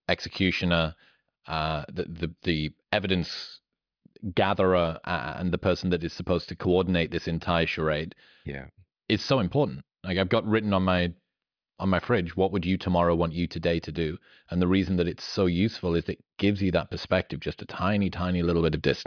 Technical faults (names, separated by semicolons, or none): none